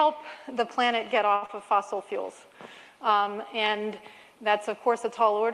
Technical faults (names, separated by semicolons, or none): short stall from a late packet; short concealed packet loss